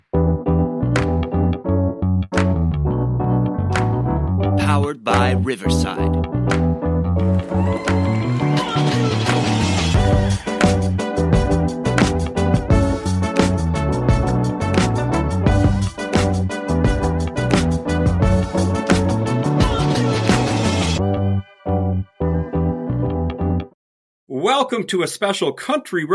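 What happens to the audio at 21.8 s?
Nothing goes wrong at 21.8 s; the audio plays through that moment intact, with no dropout, click or other fault.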